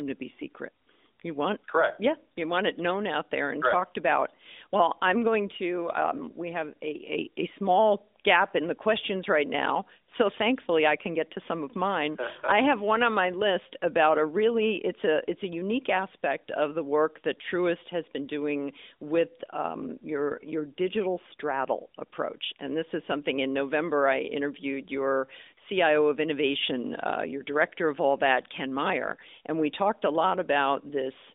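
No faults found; the speech runs over an AMR narrowband mobile codec link at 12.2 kbps, with the band held to 250 Hz to 3.7 kHz and the light coding texture expected of that path.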